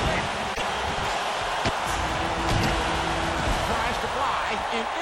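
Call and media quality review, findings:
Broken MP3 bit reservoir, 0.54–0.62 s: sound skips forward, with an 84 ms disturbance. Likely frames dropped upstream. The next 26.1 ms frames read back-referenced reservoir bytes belonging to another frame, decoding wrongly until the stream resynchronises.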